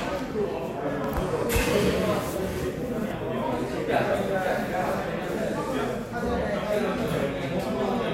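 A brief click at 1.04 s is a repeated buffer: a 5 ms piece of the sound plays twice when fresh audio arrives late, with nothing dropped.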